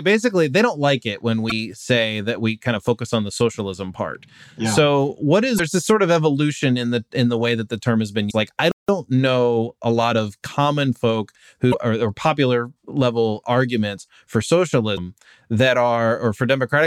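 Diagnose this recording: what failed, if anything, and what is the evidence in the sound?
Codec-level damaged data in the compressed stream: brief glitches around 1.48, 5.56 (after "part yeah so what"), 8.27, 11.70 and 14.94 s, each about 40 ms, as the decoder loses sync on corrupt frames.

Playback stall at 8.72 s: the speech just drops out for about 170 ms, likely because the player's buffer ran dry, then resumes at 8.89 s.

Time-compressed catch-up right after, 8.89 to 10.59 s: speech runs about 1.1 times fast at normal pitch, as the player splices out its backlog.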